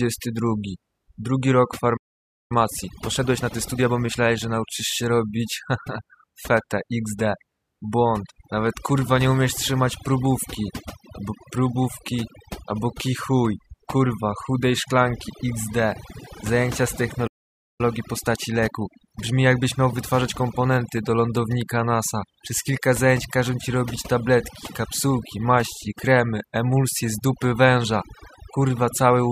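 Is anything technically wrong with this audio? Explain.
Yes. There are three kinds of fault in this speech.

Overdone noise removal affects the whole clip. The background drops and breaks up into twinkling specks. A noise reducer set too hard is pulling individual frequency bands down whenever they sit near its noise estimate, taking the quieter parts of the voice with them.

There are two playback stalls. The speech cuts out mid-flow from 1.96 to 2.52 s, about 0.53 s of silence, and again from 17.27 to 17.81 s, right after "zajęcia z", for about 0.52 s. The likely cause is the player running out of data or its thread being blocked until it recovered.

Time-compressed catch-up follows each stall. From 2.52 to 4.64 s, ending just before "się robić", the speech is hurried to 1.25 times normal speed. From 17.81 to 20.81 s, ending just before "do lądownika", it runs at 1.15 times. In both stretches the pitch stays normal. 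The player is clearing its backlog by cutting out small pieces of audio and cross-fading across the gaps.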